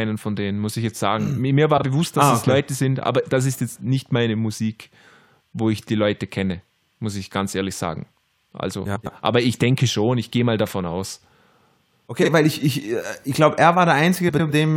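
Speech with four instances of frames out of order, where two adjacent blocks of coded audio were decoded in swapped order, so each short stretch plays its halves exchanged and sounds like a garbled flutter, with no time lost. The swaps run at 1.77–1.83 s and 12.22–12.29 s, each using blocks of about 26 ms, and at 8.85–9.07 s and 14.28–14.50 s, where blocks of about 104 ms fit runs of several frames.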